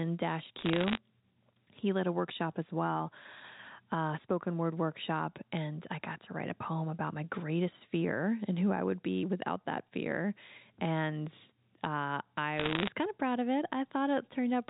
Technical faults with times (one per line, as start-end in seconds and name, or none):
0.59-0.97 bit errors on a digital phone line
12.58-12.88 bit errors on a digital phone line